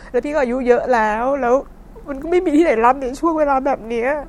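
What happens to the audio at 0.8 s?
Nothing goes wrong at 0.8 s; the speech there is intact, with no dropout, click or distortion.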